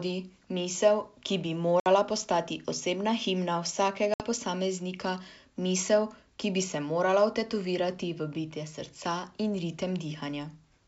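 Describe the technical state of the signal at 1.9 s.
At 1.9 s the signal is recovering from packet loss on an ADPCM call. A hard-edged silent hole runs from 1.80 to 1.87 s, covering about 60 ms, which suggests roughly three lost packets. The receiving decoder kept running without those samples. Its adaptive predictor and step size drifted away from the sender's. So when the speech resumes, it comes back with some slight distortion. It settles within some tens of milliseconds. The G.722 wideband coding carries on as before.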